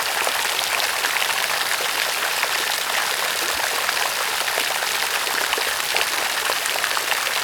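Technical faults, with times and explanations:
Nothing stood out as a technical fault on listening to the audio.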